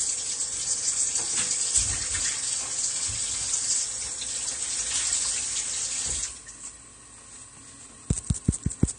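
From the first moment to the last, the audio carries plainly audible AAC compression damage, likely from AAC-LC at a low rate, which fits about 32 kbps. High frequencies sound dull and smeared, and sustained or hissy parts take on a warbling, fizzy texture. On a spectrogram the upper band stops at a hard ceiling, with patchy holes and blocky, flickering energy below it.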